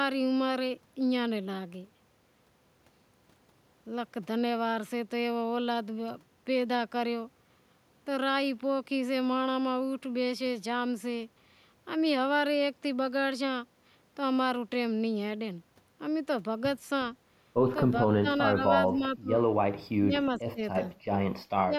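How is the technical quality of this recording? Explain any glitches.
Near the end the speech repeatedly dips and cuts out, at 18.2–18.63, 18.88–19.39, 19.99–20.13, 20.38–20.61, 20.85–20.94 and 21.62–21.73 s, with drops of roughly 10 to 25 dB. This is likely speech suppressed in double talk: an echo canceller, unable to separate talker from loudspeaker echo, attenuated both, leaving the voice choppy and thinned.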